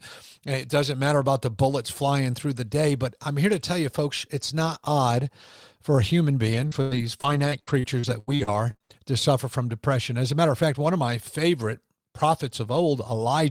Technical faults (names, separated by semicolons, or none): repeated packet loss (robotic sound)